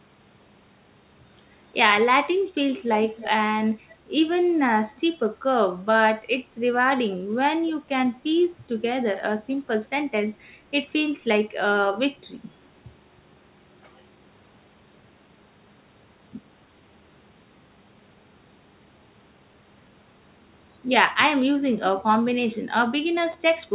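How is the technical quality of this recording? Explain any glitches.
The recording has two faint echo scraps early on and one brief jumble right at the end. All of it sits within a narrowband call path whose spectrum stops at 4 kHz, consistent with G.711 A-law at 64 kbps.

Between 3.09 and 3.30 s, and again between 3.88 and 3.96 s, a faint delayed copy of the speech trails the original by about 299 ms. The first scrap is about 15 dB below the speech and the second around 30 dB below. This is likely an echo leak: a loudspeaker on the far end fed its microphone, and the echo canceller let part of it through. On a spectrogram it shows as weak, smeared harmonic traces that repeat the shapes from 299 ms earlier.

Between 23.32 and 23.34 s, two 10 ms chunks are in the wrong order, with one arriving a chunk late and playing after its successor. This is the chunks out of order fault. No audio is lost, but the sequence is scrambled. 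The result is a short garbled moment. On the waveform you would see abrupt discontinuities at the three hard joins, and each join would appear on the spectrogram as a thin vertical broadband line.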